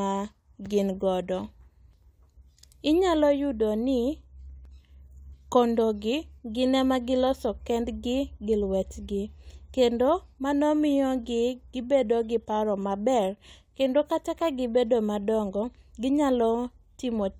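A short piece of speech, and there's nothing technically wrong to point to anywhere in it.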